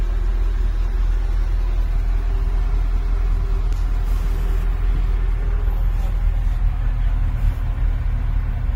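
At 1.95 s, compressed frames skipped: a single 20 ms frame likely never reached playback, so the audio jumps ahead, seen as a brief spectral discontinuity.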